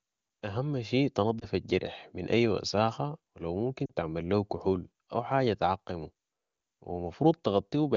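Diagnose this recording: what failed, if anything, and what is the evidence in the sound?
The speech briefly warbles and dips at 1.40 to 1.45 s, between "اهم شي" and "الجرح من اي وساخة", and again, slightly longer and dropping to near silence, at 3.86 to 3.94 s, between "اي وساخة و لو" and "تعمل ليو كحول او". These are lost AMR speech frames on the radio network. The AMR-WB decoder, which sounds like it is running near its top rate, filled each gap by repeating the previous frame at falling gain. The lengths fit one and two missing 20 ms frames.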